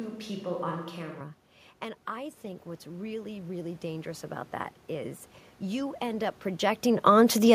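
From the first moment of this speech recording to 1.21 s, the close microphone's signal appears to be missing, and the likely cause is a switch to a distant microphone. The voice is roomy and hollow, thin in the bass, about 5 dB lower, with room noise only some 30 dB beneath it. From 2.06 s to 7.5 s, automatic gain rising follows a drop of about 12 dB at the input from the talker moving back, with the control adding about 9 dB. Voice and background swell together slowly rather than in a step.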